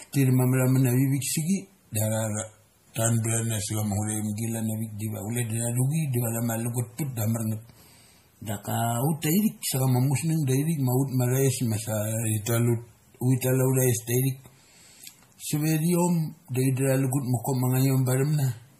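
Drift correction steps at 2.29 to 4.37 s, 7.61 to 9.80 s and 12.24 to 12.93 s in this speech recording shift speed and pitch together. The first and third slow the sound by about 6% and drop it about 108 cents, roughly a semitone. The middle one, ending just before "chama musngang dai thik", runs 6% fast and about 102 cents sharp. The likely cause is clock-matching software changing the playback rate in one step to manage its buffer. MP3 compression is also plainly audible throughout, with nothing above 15.3 kHz. Weak frequency lines dropping in and out from frame to frame give a watery, swirling texture and smeared onsets. That damage fits a low bitrate around 40 kbps.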